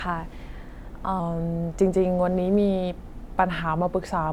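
From 1.2 s to the end, the speech turns slightly slower and lower: a wrong sample rate fault, where samples are played back at a rate different from the one they were captured at, with no conversion. The ratio, speed 0.92 times and pitch down about 1.5 semitones, fits 48 kHz material played at 44.1 kHz. On a spectrogram, harmonics and formants shift downward and syllables stretch in time. The waveform's envelopes widen accordingly.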